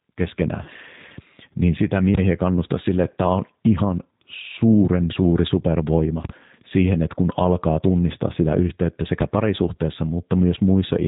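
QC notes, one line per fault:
Throughout: G.729 codec. The speech sounds plainly rough, slightly synthetic and dull, with nothing above 4 kHz. It is coded at 8 kbit/s, in the G.729A form, which rebuilds each 10 ms frame from a vocal tract filter, a pitch predictor and a few pulses.
0.63–0.70 s: VoIP packet loss concealed by the speech codec. The speech smears into a brief, fading sound, then comes back weak before recovering. About 30 ms of audio went missing, which fits a single lost packet. The decoder filled the gap by stretching its last pitch and filter at falling gain, and that error carried into the following frames.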